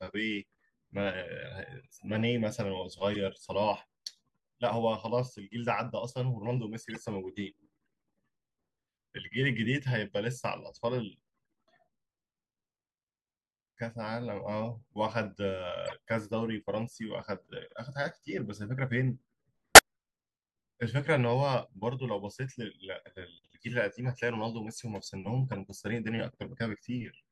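Corrupt frame decoded at 3.13 to 3.16 s, 6.90 to 6.97 s, 15.86 to 15.93 s, 19.75 to 19.79 s and 25.49 to 25.56 s: each time, damaged bits in the compressed speech stream were played instead of being concealed, so misread gains and codes put energy in the wrong frequency bands. Each short chirp or noise burst spans two to seven frames. Most peak around -25 to -30 dBFS, but the one at 19.75 s jumps to about -5 dBFS.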